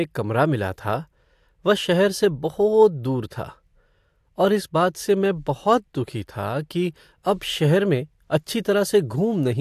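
No technical faults can be heard anywhere in this speech recording. There is nothing to time or describe, since no fault occurs at any point.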